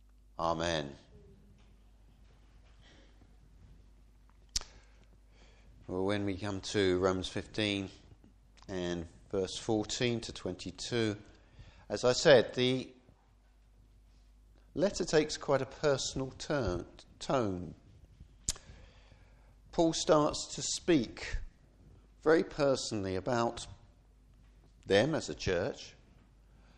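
No technical faults are audible anywhere in the recording.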